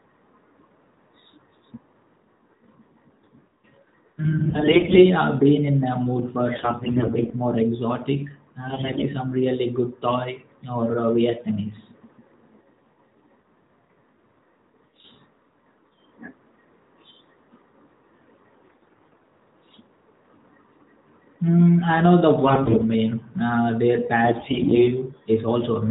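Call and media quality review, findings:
AMR bit errors: 4.50–5.05 s (before "I've been in a"), 6.56–7.35 s (between "in a mood for" and "more exotic"), 8.68–9.06 s, 18.64–19.31 s, 22.46–22.84 s (after "I know the"), 24.24–24.88 s. Pitch and level hold, but the speech turns hoarse, scratchy and gargly. Lighter at 18.6 s and 24.2 s. The cause is flipped less protected bits in the AMR-NB 12.2 kbps frames on a weak radio link, which misplace the excitation pulses and skew the fine gain and spectral values.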